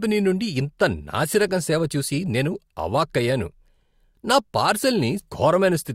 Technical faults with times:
5.19-5.24 stream segment skipped

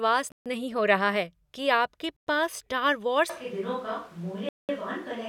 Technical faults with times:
0.32-0.46 Bluetooth stall
2.16-2.27 Bluetooth stall
3.30-5.28 switch to a distant microphone
4.49-4.69 Bluetooth stall

